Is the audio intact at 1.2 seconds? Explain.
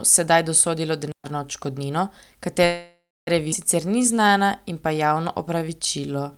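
No, 1.2 seconds falls inside a digital wireless dropout running from about 1.12 to 1.24 s, right after "sedaj dosodilo". The receiver lost too much of the data stream and muted for roughly 125 ms, so you get a clean hole of near silence, no noise burst either side.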